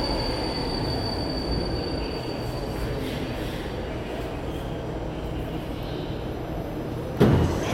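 The clip is a recording of sounds, and nothing is technically wrong with it.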